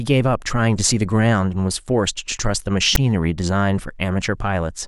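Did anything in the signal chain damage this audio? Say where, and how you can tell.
Yes. At 2.95 to 2.97 s, a storage-stage fault plays file tags as audio: text metadata decoded as samples gives a short, hard-edged rasp, offset toward one polarity, then dead silence from zero padding. The waveform shows a lopsided block, then a flat line; the spectrogram shows a broadband stripe, then a gap.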